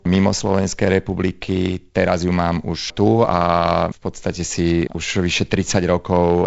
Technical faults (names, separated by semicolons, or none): none